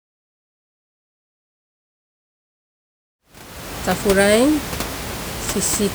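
No technical faults can be heard in this speech recording. Room noise sits about 11 dB below the speech, and a smooth fade-in begins around 3 s and reaches full level at 3.98 s.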